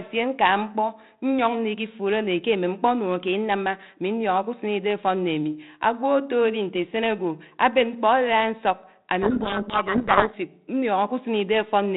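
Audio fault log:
9.22 to 10.35 s, codec payload misread: the decoder took the G.726 code words in the wrong bit order, so each sample's difference value was wrong. The speech sinks under harsh distortion for this stretch, then the normal 32 kbit/s G.726 sound returns.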